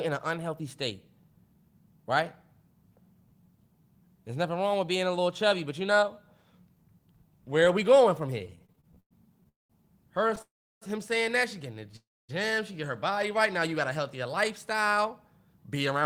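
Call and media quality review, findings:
Repeated stalls (stutter), 8.39–9.47 s, right after "are we going from": 16 short gaps, longest 107 ms, roughly a quarter of the span filled with stretched sound. Jitter buffer repeatedly underrunning as packets arrive late; the receiver extends the last sound, so the audio drags.

Repeated stalls (stutter), 10.28–10.42 s, just before "saying that she getting": 4 brief gaps, longest 14 ms, about 29% of the span concealed. Same jitter buffer underrun pattern, milder here.

Call audio freeze, 9.49–9.72 s: 0.21 s inserted gap, last sound held then fading to near silence for 0.18 s. Likely jitter buffer emptied by delayed packets; playback resumes where it stopped.

Call audio freeze, 10.42–10.83 s: 0.40 s inserted pause, about 0.34 s silent. Likely the same held-up packet delivery; nothing lost, delay grows by 0.40 s.

Call audio freeze, 11.96–12.31 s, after "that she getting the": 0.32 s pause, 0.26 s of it silent. 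Likely jitter buffer underrun from packets held up in transit; audio continues intact afterwards.

Jitter buffer speed-up, 14.28–16.03 s: playback about 4% fast at unchanged pitch. Receiver trimming short pitch-period pieces to drain excess buffered audio after the earlier delays, around 70 ms removed in total.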